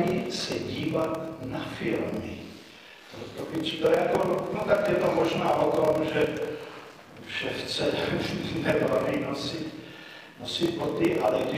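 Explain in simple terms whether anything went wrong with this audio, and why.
Block size mismatch (padded), throughout the clip: silent gaps pad out every block, causing a 38.3 Hz buzz and slowing the sound to 0.889 times normal speed.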